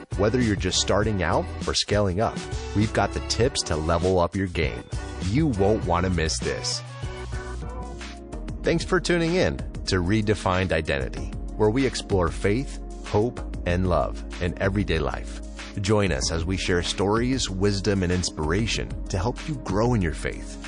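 Across the whole clip the upper detail swirls and turns watery as weak components drop in and out. This plainly audible damage is likely MP3 compression at a starved bitrate, consistent with roughly 40 kbps.

From 9.85 to 9.87 s, a 21 ms burst of hiss about 14 dB above the surrounding level arrives just before a sharp attack. This is pre-echo. Quantisation noise spread across a long transform block of about 52 ms, with no switch to short blocks, leaks ahead of the onset and softens it.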